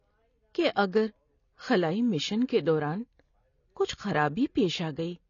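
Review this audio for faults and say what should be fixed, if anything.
AAC compression runs throughout the speech: nothing reaches above 7 kHz, and sibilants and sustained sounds have a smeared, warbling texture. This likely comes from AAC-LC coding at a low bitrate, around 24 kbps, where the encoder drops the top band and thins out the remaining spectrum. Re-encode from the original source at a much higher bitrate, or deliver a lossless copy.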